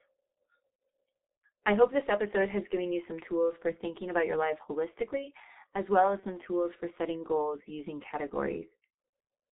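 It's a speech clip run through the G.723.1 codec, and the damage is heavy: nothing above 4 kHz survives, so it's muffled and hoarse, with smeared consonants. The low-rate mode and slow-updating voice model fit the 6.3 kbit/s setting. There's also VoIP packet loss concealed by the speech codec from about 6.20 to 6.25 s, between "holistically as well as" and "tools for setting goals". It sounds like one 30 ms frame went missing and the decoder filled it by stretching the last sound into a brief fading buzzy tone or coloured noise, with the voice staying weak or distorted as it recovers.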